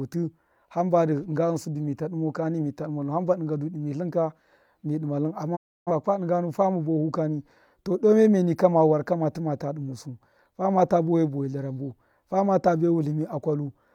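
At 5.55 s the speech drops out in a digital broadcast dropout. The receiver lost good frames and muted, fading to silence over about 20 ms. Roughly 0.3 s is gone, which fits around seven lost frames, before sound returns at 5.91 s on "dṫnga nu fama".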